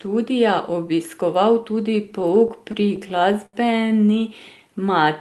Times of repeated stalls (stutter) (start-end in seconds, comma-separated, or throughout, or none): 2.11-3.55